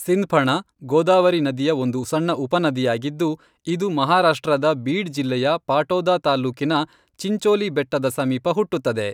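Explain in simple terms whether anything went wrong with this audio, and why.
Nothing went wrong; the speech sounds as it should.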